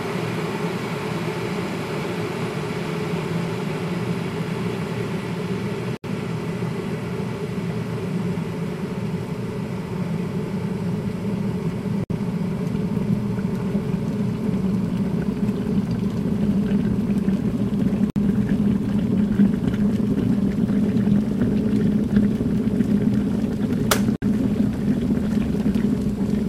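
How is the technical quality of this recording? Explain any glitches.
The recording has one recurring fault: a gap at a join of encoded pieces, heard four times at a steady six-second spacing. Short dropouts open at 5.97 s (about 70 ms), 12.04 s, 18.10 s and 24.16 s (about 60 ms each), then the sound resumes where it left off. The audio appears to have been encoded in six-second pieces and joined without trimming, so each piece's start-up delay and final-frame padding remain as silence. On a waveform each appears as a flat, near-zero notch with smeared edges. On a spectrogram it shows as a thin vertical blank stripe across all frequencies.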